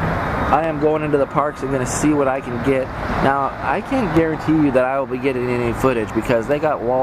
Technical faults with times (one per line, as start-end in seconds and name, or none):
0.64-6.51 clock drift buffer slips